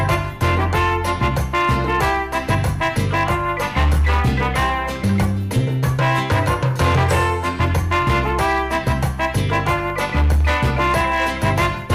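From start to finish, loud moments carry a harsh, gritty fuzz. This is hard clipping. The signal is driven about 9 dB past what the chain can pass, so the peaks are sliced flat, and roughly 7 percent of samples hit that ceiling, spraying added high harmonics.

From 9.40 to 10.52 s a train of clicks ticks across the sound, about ten sharp pops at a steady pace of roughly 10 per second, each about as loud as the audio itself. A likely cause is pulsed interference from nearby equipment or a faulty connection or power supply.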